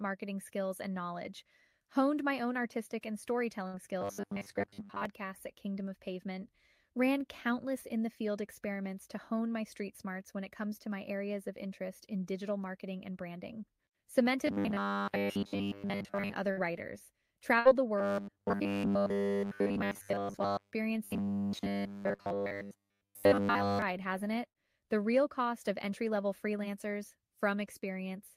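A speech recording carrying two distinct transmission faults. Four bursts of packet loss occur at 3.67, 16.51, 17.59 and 24.49 s, each lasting about 90 ms. The receiver stretches the last sound for roughly 60 ms, so it becomes a decaying buzz or hiss, and then jumps ahead past about 60 ms of missing audio. On a spectrogram each burst appears as a short smeared band that fades, followed by a hard seam where the speech resumes. Robotic sound from repeated short buffers takes over from 4.01 to 5.05 s, 14.47 to 16.34 s, 17.98 to 20.72 s and 21.04 to 23.82 s. During these stretches the speech turns into a stiff metallic drone locked to 100 Hz. This is most likely a 10 ms buffer being replayed while the real audio is skipped, covering most of the first two stretches and all of the last two. The spectrogram shows evenly spaced horizontal harmonics at multiples of 100 Hz, and the waveform shows an identical short cycle repeating.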